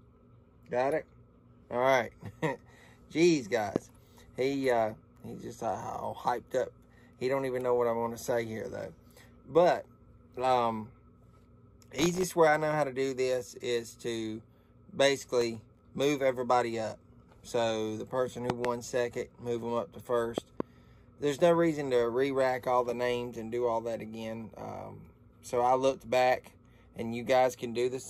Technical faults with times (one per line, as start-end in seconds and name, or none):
3.76-3.78 loud pop
11.99-12.23 processor overload crackle
15.41-15.80 processor overload crackle
18.50-18.67 loud pop
20.38-20.62 loud pop